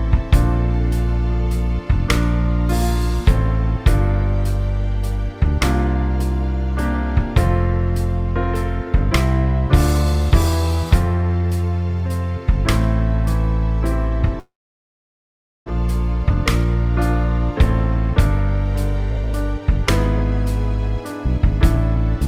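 At 14.39 s the audio cuts out and stays out until 15.70 s. The tail of the last sound smears on as a brief buzzy continuation, then settles into silence for most of that gap, about 1.16 s. When it returns, roughly a second of material is simply gone. That's most likely a long network dropout: packets stopped arriving, the receiver concealed what it could, and playback skipped ahead to live audio, picking up something like a few hundred milliseconds of extra delay along the way.

Shortly after, you get two jitter buffer speed-ups as the receiver works that backlog off. From 16.30 to 16.86 s the audio runs about 9% fast, and from 19.11 to 19.71 s about 10% fast. Pitch stays put, but the passage feels slightly hurried. Tiny pitch-period-sized slices are being trimmed out back to back to drain the buffer. It's roughly 50 ms gone in the first stretch and around 70 ms in the second.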